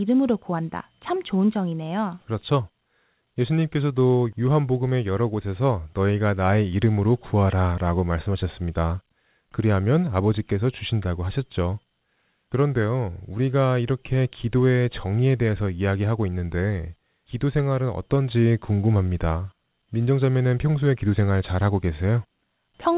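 Nothing goes wrong here. The speech comes over an ordinary call line using G.711 A-law at 64 kbps, so the sound simply stops at 4 kHz as that codec intends, and no faults turn up anywhere along the way.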